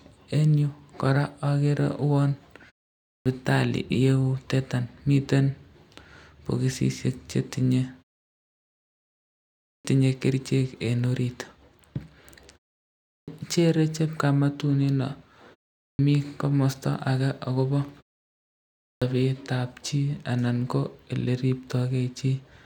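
At 3.10, 9.68, 13.12, 15.83 and 18.87 s the speech resumes with a clipped start after a pause. Each time, the output path had dropped into an idle state during the preceding silence (0.36 to 1.73 s long) and needed time to wake before passing audio again. Roughly 150 to 170 ms of onset is swallowed at each point, so words jump in abruptly, missing their first sounds.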